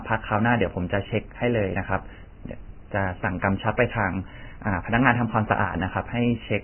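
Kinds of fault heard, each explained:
Vorbis compression: The speech sounds hissy and grainy throughout, with nothing above 3 kHz. That fits a likely heavy Vorbis encode near 10.7 kbps.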